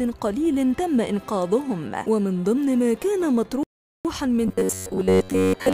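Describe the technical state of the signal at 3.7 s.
At 3.7 s the signal is inside a rebuffering stall running from 3.63 to 4.05 s. Playback ran out of downloaded audio and halted until more arrived, so the sound cuts to silence and then picks up exactly where it stopped, adding 415 ms to the timeline. Unlike a dropout, which blanks a stretch and loses it, nothing is missing here: no material is skipped, the gap is simply inserted time.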